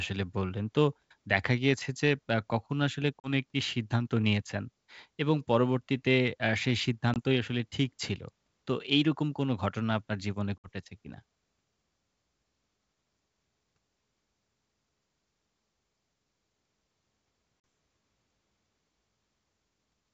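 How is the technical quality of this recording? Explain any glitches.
The recording is wideband telephone audio with dropouts. The G.722 wideband telephone coding sounds consistent with the full 64 kbit/s mode, clear well up into the high range, but the call suffers packet loss on an ADPCM call in four places.

The holes, each hard-edged, fall at 3.20–3.30 s (about 40 ms lost), 7.14–7.19 s (20 ms), 10.58–10.69 s (60 ms) and 17.60–17.64 s (40 ms). Missing packets became silence, knocking the decoder's predictor and step size out of sync, so the audio comes back distorted for some tens of milliseconds before settling.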